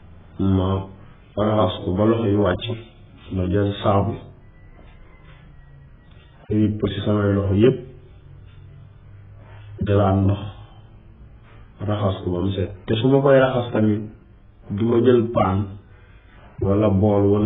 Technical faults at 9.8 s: AAC compression

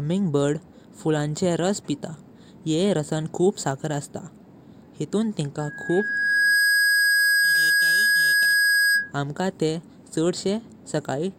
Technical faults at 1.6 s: none

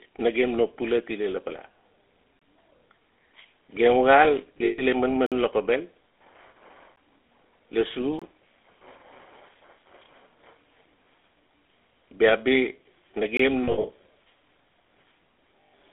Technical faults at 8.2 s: GSM full-rate codec; block of digital silence

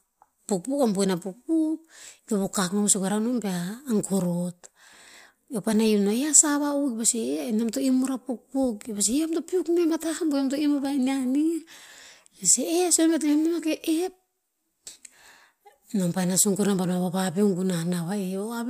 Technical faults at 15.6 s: none

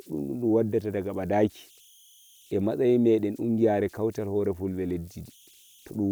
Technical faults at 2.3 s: converter idle tones

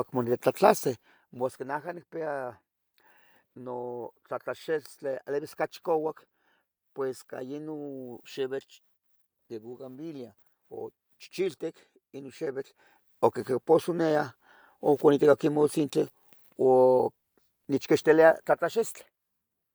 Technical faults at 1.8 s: none

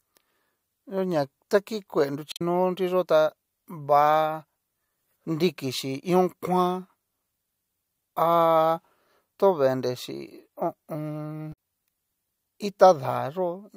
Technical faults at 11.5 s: damaged data in a compressed stream

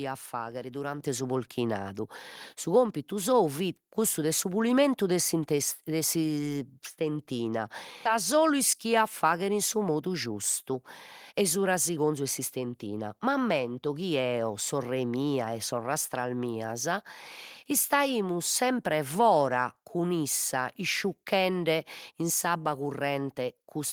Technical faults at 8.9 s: jitter buffer speed-up

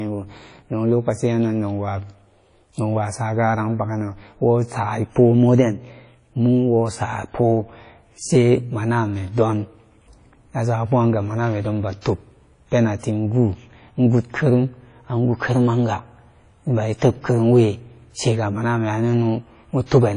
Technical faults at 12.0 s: WMA compression; pre-echo

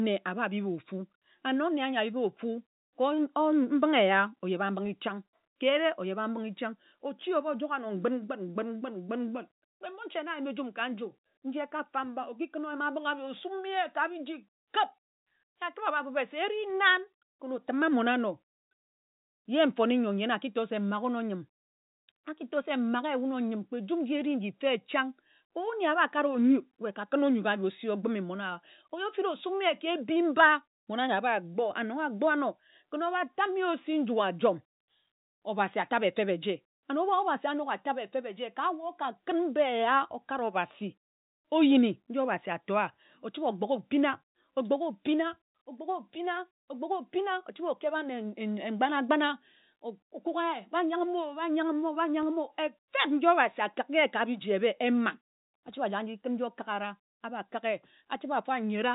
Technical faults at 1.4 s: none

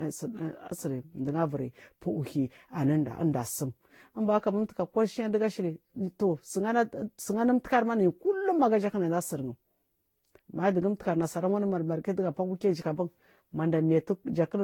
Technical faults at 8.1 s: generation loss

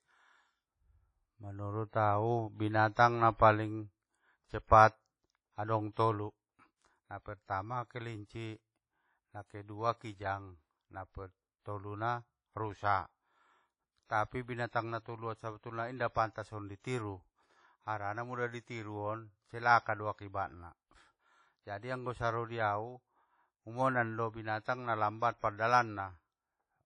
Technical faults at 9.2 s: WMA compression

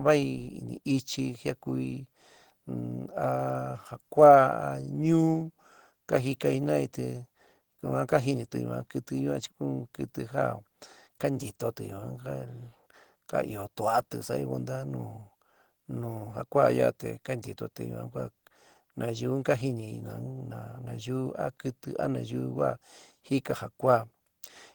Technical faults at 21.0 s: Opus compression

